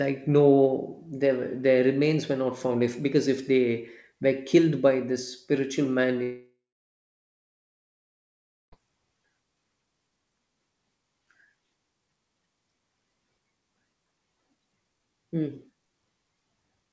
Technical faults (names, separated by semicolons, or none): long network dropout